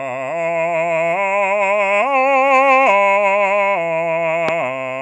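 A music clip with one loud pop at 4.49 to 4.51 s, a single sharp thump standing well above the music, likely from a voltage pulse such as a plug, switch or static discharge. Unlike a dropout or glitch, nothing goes missing: the music carries on underneath.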